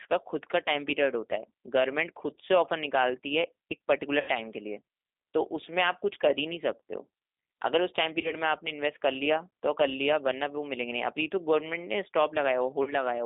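Speech heard through the G.729 codec at 8 kbit/s, with the line confined to roughly 200 Hz to 3.7 kHz. Rebuilding the voice from a vocal-tract filter, pitch predictor and a few pulses per frame leaves it plainly rough and synthetic. VoIP packet loss concealed by the speech codec occurs at 4.20–4.30 s, 8.21–8.35 s and 12.83–12.95 s. The decoder stretches its last pitch and filter state into a fading buzzy tone or coloured noise, bridging gaps that fit about 80, 30 and 40 ms of missing audio. The voice then stays weak briefly as the frame-to-frame state recovers.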